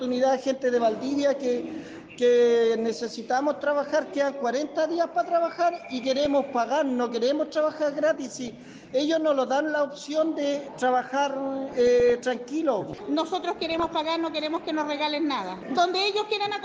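From start to finish the sound is dull and plainly gurgling, with a granular roughness, most likely from MP2 compression at a rate that fits roughly 80 kbps. Starved of bits, upper sub-bands switch off and flicker, and the remaining bands are coarsely quantised.

DAB burbling breaks in at 6.24–6.33 s, 8.48–8.59 s, 11.71–12.12 s and 13.58–13.90 s as short blips of noise. These point to bit errors of a few tenths of a percent getting past error correction, corrupting samples in single sub-bands.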